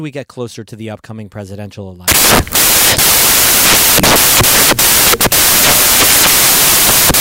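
Right after "to the upcoming presidential", at 2.08 s, the samples are built from the wrong bytes through to the end: each value gets assembled off by a byte or in swapped order, so the jittery low bits dominate and you get loud, harsh broadband noise.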